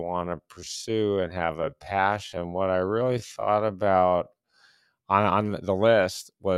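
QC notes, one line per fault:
0.0–4.6 s, time-stretched section: the speech runs at about 0.62 times normal pace with its pitch unchanged, so it drags. Slowing is likely from software stretching the audio to fit a length, repeating short pieces.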